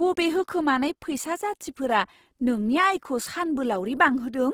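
Throughout, the speech sounds rough and grainy, turning noisy rather than swirly. This likely comes from Opus compression in its music mode at a low rate, which fits about 16 kbps. The encoder noise-fills starved bands, so a spectrogram shows speckled, hole-free texture reaching 20.2 kHz.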